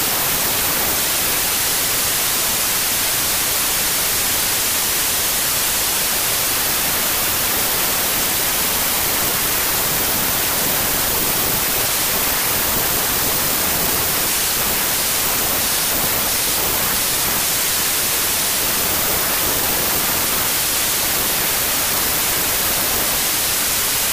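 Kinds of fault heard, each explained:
Wrong sample width, throughout: hiss-like noise buries the sound, which plays at 0.667 speed and lower pitch, fitting packed 24-bit samples read as 16-bit.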